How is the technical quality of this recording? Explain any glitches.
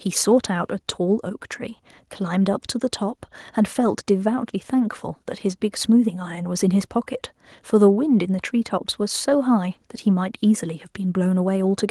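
No technical faults are audible.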